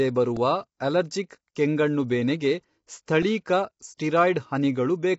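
Low-delay AAC compression runs through the whole clip, likely AAC-ELD at a rate that fits about 24 kbps. Coding damage is plainly audible in the speech, and nothing is present above 7.8 kHz, where the coder's limited bit budget cuts off the top band.

A repeated buffer occurs at 0.37 s: fresh audio arrived late, so a 1.45 ms chunk, which fits a 64-sample buffer, played once more with a hard join, giving a click. About 1.5 ms of audio was lost.

The same fault returns at 3.23 s, this time with the chunk playing three extra times. That produces a brief buzz rather than a single click, and roughly 4 ms of audio is missing.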